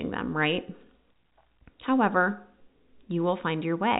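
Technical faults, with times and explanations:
No technical faults can be heard in this speech.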